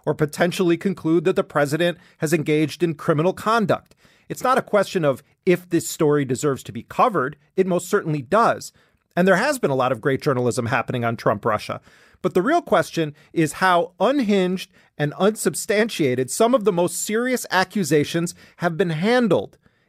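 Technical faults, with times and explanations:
No technical faults heard.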